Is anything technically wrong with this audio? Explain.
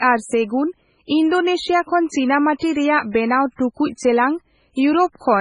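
Yes. Throughout the speech there is heavy damage that is likely MP3 compression, and at 3.96 s there is pre-echo.

Across the whole clip, nothing sounds above 10.5 kHz, and the sibilants have a watery, swirling, metallic quality. The encoder appears to have been starved of bits, which fits a very low bitrate near 16 kbps. So it cut off the treble and dropped weak frequency lines that blink in and out between frames. On a spectrogram this shows as a hard ceiling at 10.5 kHz and patchy, flickering holes in the upper bands.

From 3.96 to 3.99 s, a short hiss runs ahead of a sharp attack for about 27 ms, and the onset itself sounds smeared. The codec spreads the quantisation noise meant for the loud transient across its whole block, so that noise also fills the quiet gap before the attack. The waveform shows low-level fuzz rising just before the transient. The spectrogram shows broadband smudging that arrives a few tens of milliseconds early.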